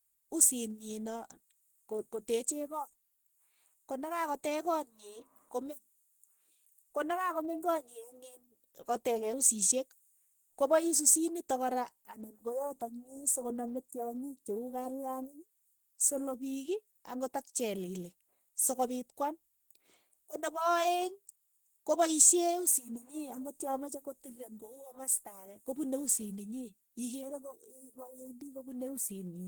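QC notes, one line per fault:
Throughout, Opus compression: the speech sounds hoarse and grainy, likely from low-rate hybrid-mode encoding near 16 kbps, though the highs still reach 20.1 kHz.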